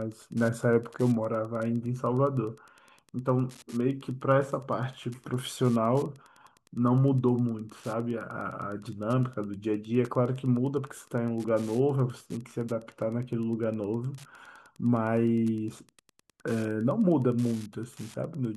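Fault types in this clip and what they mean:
Wi-Fi interference: A nearby Wi-Fi radio's transmissions are being picked up and rectified by the audio circuitry, so its regular beacon signal leaks into the recording as audible pulses. Here the beacon repeats every 102.4 ms, giving a steady ticking just under ten times a second that runs under the speech for the whole clip. The ticks sit roughly 30 dB below the speech.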